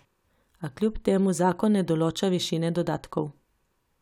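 No technical faults appear at any point in the recording, so there is nothing to place in time order.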